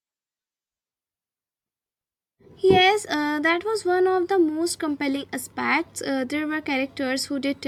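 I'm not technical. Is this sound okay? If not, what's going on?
Yes, this one's fine, with nothing going wrong anywhere in it, so there's nothing you need to worry about.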